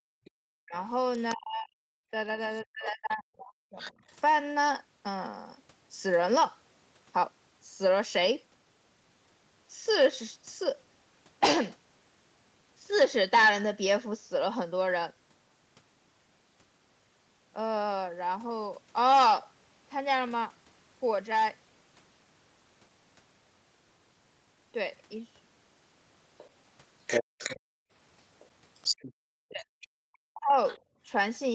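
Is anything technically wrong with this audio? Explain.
Yes, there are echo-canceller problems at both ends of this speech clip.

Background gated by the echo canceller: from 0.00 to 0.33 s, and in spells totalling under a second between 27.24 and 31.02 s, the room sound drops by about 40 dB and returns. The canceller clamped the microphone hard while the loudspeaker was active.

Other side's voice leaking through: a second voice is audible from 0.25 to 4.16 s, around 15 dB below the talker, and from 26.38 s to the end at roughly equal level. It is likely residual loudspeaker echo the canceller failed to subtract from the microphone.

Speech suppressed in double talk: between 0.61 and 4.0 s the talker's voice dips by up to roughly 40 dB for about two seconds in all, and again from 29.48 s to the end. This is likely the canceller attenuating both voices while they overlapped.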